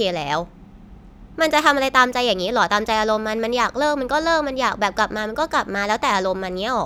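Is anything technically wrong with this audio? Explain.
No, the speech signal shows no technical faults that can be heard anywhere in the clip.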